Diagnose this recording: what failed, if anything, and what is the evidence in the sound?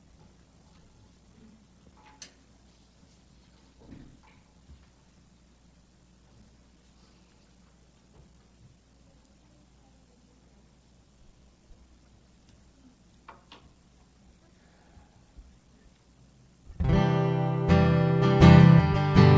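Nothing in the recording points to a failure at any stage of the chain, from the analogue wiring through to playback.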